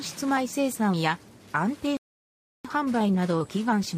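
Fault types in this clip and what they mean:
Playback stall: the sound just drops out at 1.97 s and stays silent for about 0.68 s, picking up again at 2.65 s, so the flow gets interrupted mid-stream rather than faded or clipped. What's going on is likely the player starving for data or having its playback thread blocked, so nothing reaches the output until it catches up and carries on from there.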